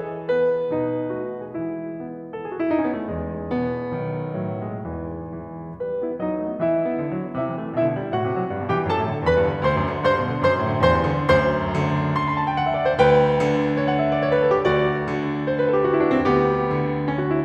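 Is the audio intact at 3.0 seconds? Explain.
Yes, the music plays through 3.0 seconds with no audible dropout, click, distortion or other technical fault.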